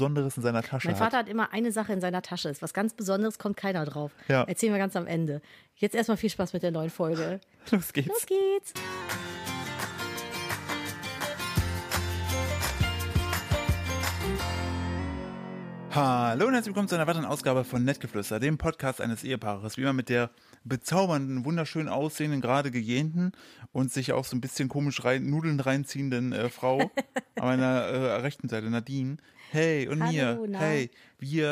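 From 7.11 to 9.02 s, and again from 14.99 to 15.63 s, the audio runs about 6% fast and rises nearly a semitone, then snaps back. This is likely a drift correction step, where clock-matching software briefly changed the playback rate.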